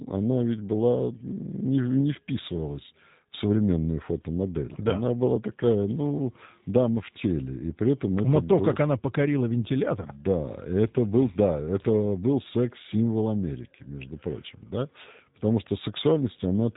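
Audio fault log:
throughout: G.729 codec. Nothing above 3.8 kHz survives, and the speech has a plainly audible rough, synthetic edge because each 10 ms frame is rebuilt from a vocal tract filter, a pitch predictor and sparse pulses. This fits an 8 kbit/s G.729A stream.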